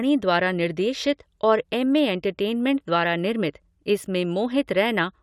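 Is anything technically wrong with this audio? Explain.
No, nothing is technically wrong with this audio.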